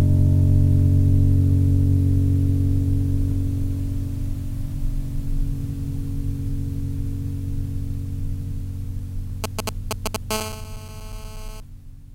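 From 9.44 to 10.16 s, GSM signalling bursts break into the music: a galloping run of ticks and brief 217 Hz buzzes, roughly as loud as the music. A nearby 2G phone is exchanging short radio bursts with the network, and the audio circuitry is rectifying them.

From 10.31 to 11.60 s, a GSM phone buzz follows. It is a continuous, raspy 217 Hz tone rich in harmonics, about 12 dB below the music. The phone is now transmitting steadily as in a call, and its pulsed carrier is again being rectified.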